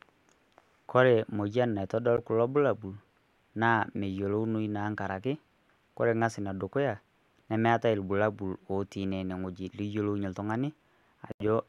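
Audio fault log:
2.17–2.19 s and 11.32–11.43 s, Bluetooth stall: packets were likely held up by radio interference, draining the headphone buffer, so the speech drops to silence for 11 ms, then 82 ms, before resuming.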